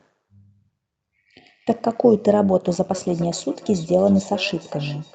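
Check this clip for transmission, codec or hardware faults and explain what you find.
Two faults are present in this speech: an overlap-add ripple that runs through the whole clip, and a feedback echo between two devices that begins partway through.

Overlap-add ripple, throughout: the frames were windowed and rejoined with an overlap whose gains don't add up evenly, so the level swings by about 6 dB once per frame, at around 100 Hz. That produces a metallic buzz with extra tones around each sound, over everything.

Feedback echo between two devices, from 2.92 s to the end: a second device in the same room replays the far side, and the microphone picks it up again. Its canceller can't remove sound it didn't play itself, so each phrase returns roughly every 0.4 s, peaking about 16 dB below the speech, thinner and more ringing on each pass.

The call path's 8 kHz bandwidth limit is audible as a dull top end, which is expected for this kind of link.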